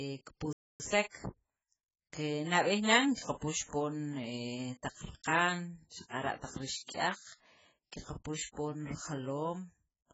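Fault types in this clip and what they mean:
AAC compression: The speech sounds dull and smeared, with a fizzy, warbling edge on sibilants, likely from heavy AAC-LC coding at a very low bitrate, consistent with about 12 kbps. A spectrogram shows a lowered cut-off.
playback stall: The audio cuts to silence mid-flow from 0.53 to 0.80 s, a gap of 0.27 s, then carries on, likely because the player ran short of data or was blocked. The waveform shows a flat stretch and the spectrogram a blank vertical band.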